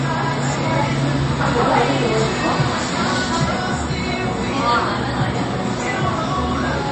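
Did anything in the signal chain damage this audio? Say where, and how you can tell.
Yes, at the codec stage: a hard treble ceiling near 8.3 kHz on the spectrogram throughout, with flickering gaps and swirly smearing. This is likely MP3 compression, consistent with roughly 32 kbps.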